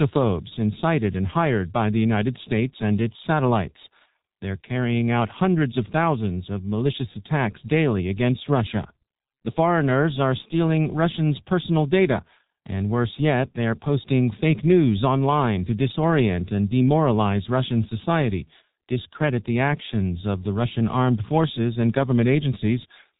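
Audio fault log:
throughout: G.723.1 codec. The speech has been squeezed through a very low-rate telephony codec, which fits the G.723.1 coder at 6.3 kbit/s, working in 30 ms frames. The damage is heavy. Nothing reaches above 3.8 kHz, so the upper band that gives speech its brightness and sibilance is missing, and the result sounds muffled. The codec's vocal model updates only once per frame, so it lags behind quick changes, leaving consonants smeared and the voice hoarse.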